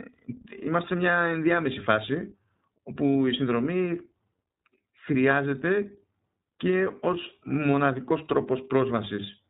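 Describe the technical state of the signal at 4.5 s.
At 4.5 s you're hearing the iLBC codec, which runs through the whole clip. Each 30 ms frame has its excitation coded on its own, without relying on the previous frame, which fits the 13.33 kbps mode. Nothing above 4 kHz gets through, so the speech sounds boxed-in and narrowband, with a clearly audible rough, slightly synthetic edge where the coarse excitation fails to capture the natural texture.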